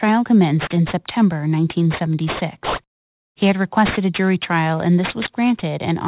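Speech clip with aliasing from start to finish: high content folds back below 4 kHz as gritty, metallic junk only about 15 dB down, which fits an unfiltered downsample to 8 kHz.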